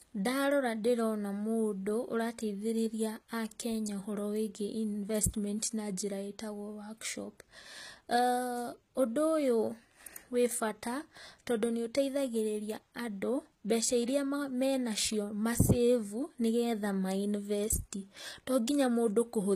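The speech was likely passed through HE-AAC compression at a low rate, one that fits about 20 kbps, with the treble rebuilt by copying lower bands upward. Throughout, s sounds turn gritty and metallic, and nothing is present above about 14.9 kHz.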